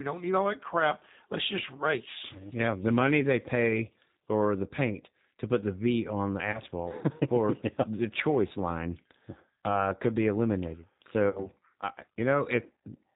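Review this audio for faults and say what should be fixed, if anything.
G.729 codec, throughout: the speech is rebuilt at 8 kbit/s from a vocal-tract filter and sparse pulses, so nothing above 4 kHz survives and it sounds rough and synthetic.

VoIP packet loss concealed by the speech codec, at 1.77–1.83 s, 6.52–6.60 s after "on the", and 11.29–11.47 s after "uh could be eliminated": the decoder extends its last pitch and filter into a fading buzzy tone or coloured noise. The first two gaps fit about 20 ms of lost audio; the third fits about 60 ms, and the voice stays weak or distorted for a while after packets return as recovery carries over.

Use a wideband codec at a higher bitrate and add jitter buffering with forward error correction or redundancy to avoid both faults.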